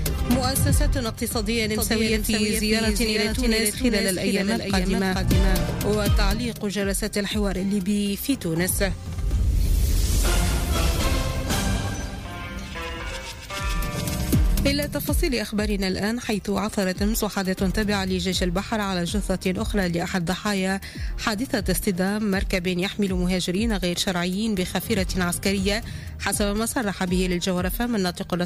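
From 1.75 s to 5.63 s a doubled audio track appears: a second, full-band copy of the sound trails the original by around 400 ms at roughly 5 dB lower, likely because a slower capture path fed the same signal into the mix again. Unlike an echo or reverb, the copy is a single clean repeat with no decay tail or room colouring, and it switches on and off abruptly at those times.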